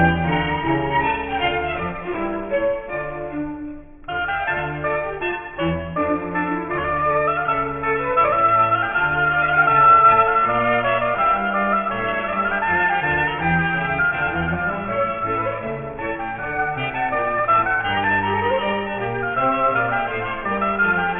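Aliasing runs throughout: everything above about 3 kHz folds back down as gritty, metallic tones at fairly strong levels, pointing to an unfiltered drop to roughly a 6 kHz sample rate.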